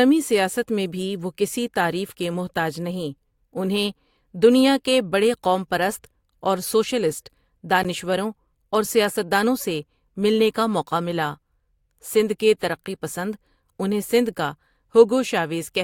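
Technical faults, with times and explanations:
7.83 s, gap between stream segments: right there the speech drops out for roughly 14 ms, a tiny hole of dead silence with hard edges on both sides, so you hear a quick tick or stutter. The timestamps of two consecutive stream segments don't quite meet, and the player pads the missing stretch with silence. Its position fits a boundary between 4-second segments. Nothing is actually lost from the speech; the clip just gets about 14 ms longer.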